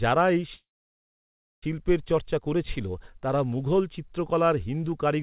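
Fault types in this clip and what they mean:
Call audio freeze: packets were likely held up, draining the jitter buffer, so after "যারা এই" at 0.54 s the receiver extended the last sound, then fell silent for about a second, resuming at "চর্চা করেছিল তারা মুঘল" with nothing lost, just a 1.1 s gap inserted.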